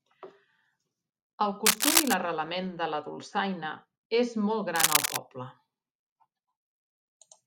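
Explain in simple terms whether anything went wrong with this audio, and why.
Two bursts of cable scratch noise break into the speech, from 1.65 to 2.14 s and again from 4.75 to 5.19 s, each lasting about half a second. They sound like harsh scratching or crackling laid over the speech, and briefly louder than it. The likely cause is a worn cable, plug or connector being moved: its electrical contact flickers rapidly, and those tiny interruptions turn into rough, uneven noise in the recording.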